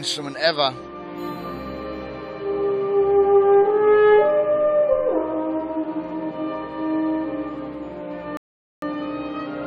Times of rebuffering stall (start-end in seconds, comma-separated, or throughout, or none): 8.37-8.82